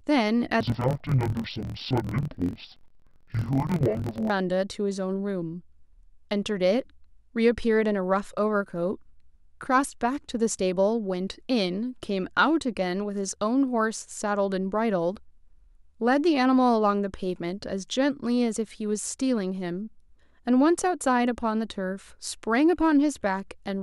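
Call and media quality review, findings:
Speech drops an octave, sounds doubled and choppy with a rough 43.1 Hz flutter, 0.61–4.30 s. Interleaved audio read as planar, likely in the decoder/mixer buffer path: stereo blocks split into halves, played at half speed, fits 1024-sample (23.22 ms) blocks.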